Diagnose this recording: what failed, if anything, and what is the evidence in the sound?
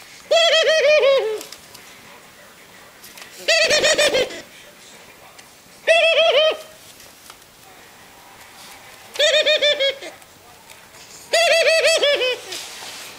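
Between about 3.63 and 4.58 s there's a block size mismatch (truncated) somewhere in the driver or buffer stage. You can hear a steady 50 Hz buzz, which is the block rate, and the sound runs about 1.07 times fast while staying at roughly its normal pitch. One stage is writing longer blocks than the next one reads, which fits 1024-sample writes, so the tail of every block gets dropped and the audio skips ahead at each boundary.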